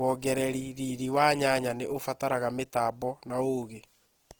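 From start to finish the speech carries plainly audible Opus compression: tones sound rough and grainy rather than swirly, likely from starved bands being filled with folded or noise-like content. The grit suggests roughly 16 kbps, though the top still reaches 20.2 kHz.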